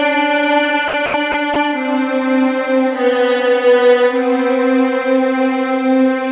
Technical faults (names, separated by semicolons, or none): sound dropped by the voice detector